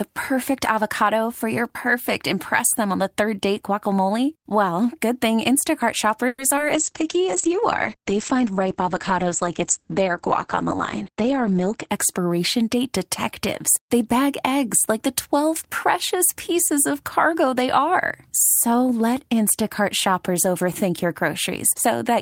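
At 6.27 to 6.40 s the sound stalls and the last moment is stretched into a fading buzz for about 0.13 s before the sound resumes where it stopped. This is a call audio freeze, likely from packets held up in transit so the jitter buffer ran dry. About 110 ms of delay is added, and nothing is lost.

A short concealed packet loss follows at 6.56 to 6.59 s. About 40 ms of audio never arrived in time, and only about 10 ms was synthesized to bridge the hole, so a brief smear is heard. Part of the delay built up by the freeze is clawed back here.

From 6.75 to 11.95 s there is a call bitrate drop. The encoder falls from 32 kbps to 10 kbps and the coded bandwidth narrows from 20 kHz to 8 kHz, holding at the lowest rate for about 5.0 s. The sound turns muffled and rough, losing its upper range until the rate recovers.

Overlapping the end of that stretch, a jitter buffer speed-up runs from 11.09 to 12.41 s, just before "date detectives". 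The receiver trims small pitch-period pieces to shed excess buffered audio, roughly a tenth of a second in total. The sound plays about 7% fast at unchanged pitch and comes across slightly hurried.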